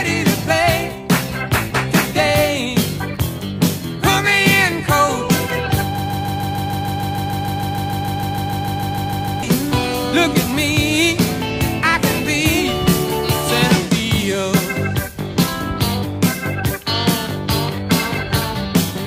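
At 5.98 s the audio catches and turns into a broken-record loop. A fragment of about 150 ms repeats exactly, back to back, roughly 23 times, until it breaks free at 9.43 s. That gives a rapid, mechanical stutter lasting nearly three and a half seconds. Whatever should have played in that stretch is gone. The likely cause is a player, encoder or stream that stalled and kept resending the last chunk it held.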